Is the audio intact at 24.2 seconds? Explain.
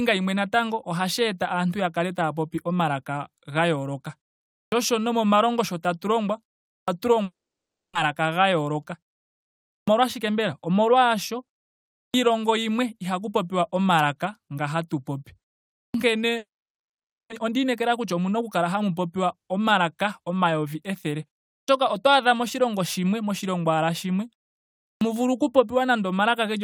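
Yes, the audio is intact at 24.2 seconds, with no fault at that moment.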